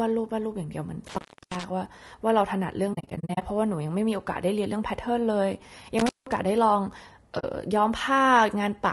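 Speech with a rough, grainy timbre throughout, noise filling the gaps between harmonics and a dulled, synthetic-sounding top band, likely from low-delay AAC compression at a low bitrate. Intermittent contact cuts the sound at 1.07–1.64 s, with the line open for about 0.32 s, and at 5.99–6.37 s, open for about 0.18 s. The crackle at the edges of each dropout sets these apart from codec gaps. AAC frame loss with muting leaves soft holes that fade out and back in. Between 2.93 and 3.43 s, 280 ms is lost in short scattered runs of a few tens of milliseconds, and a brief 40 ms hole follows at 7.39–7.44 s.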